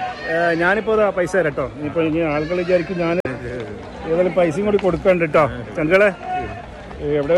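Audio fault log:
3.20–3.26 s, damaged data in a compressed stream: there's a quick glitch here lasting about 60 ms. A stretch of the encoded data got corrupted, so the decoder couldn't make sense of the frames there. It either played garbage or threw them out, then lost its footing and had to hunt for the next valid frame header before things settled back in.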